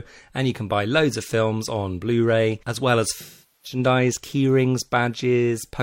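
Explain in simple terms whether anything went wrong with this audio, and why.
AAC frame loss with concealment occurs from 3.20 to 3.79 s. Part of the compressed speech never arrived, roughly ten frames' worth, and the decoder covered the gap by reusing the last good sound. That patch is guessed rather than real.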